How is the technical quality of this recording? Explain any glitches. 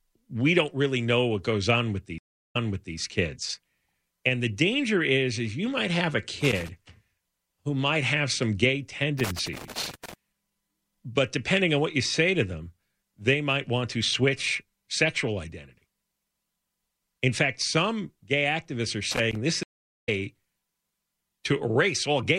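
The recording is marred by two stream dropouts and three bursts of contact crackle, all brief.

A stream reconnect occurs at 2.18–2.97 s, right after "what goes on with". Sound stops for about 0.36 s, then a fresh decoder resumes about 0.42 s earlier, so a short stretch of speech repeats. A second one occurs at 19.63–20.09 s, with about 0.44 s of silence, after which playback jumps ahead by roughly half a second and that speech is lost. On a waveform each appears as a flat gap, followed by a soft fade-in as the restarted decoder's first frame fades in.

Loose connector crackle appears at 6.41–6.69 s, at 9.19–10.14 s after "might have some gay", and at 19.12–19.36 s after "some gay activists are". A worn contact in the signal path is rapidly making and breaking, chopping the audio into an irregular scratchy rattle. On a spectrogram these bursts show as ragged vertical streaks spread across the full frequency range. 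The waveform shows jagged spikes and momentary dropouts in place of smooth speech.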